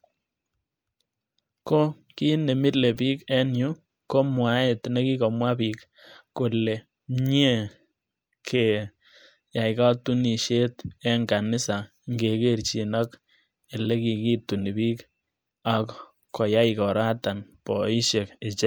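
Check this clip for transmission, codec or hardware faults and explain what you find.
One fault turns up in this speech recording, corrupt frame decoded. From 2.94 to 2.99 s there is a short chirp, squeak, blip or burst of noise, peaking around -35 dBFS. Flipped bits in a few compressed frames were decoded anyway, so misread gains and codes placed energy at the wrong frequencies for those frames.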